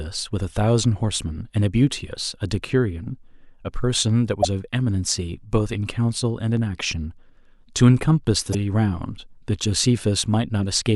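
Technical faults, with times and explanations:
4.40–4.45 s and 8.51–8.55 s, damaged data in a compressed stream: two short bursts, each under 50 ms, break into the speech as a harsh blip or squawk. At both points some bytes of the encoded stream are wrong. The decoder either rebuilds a frame from bad values or discards it, loses its place in the bitstream, and must search for the next valid frame header before clean sound resumes.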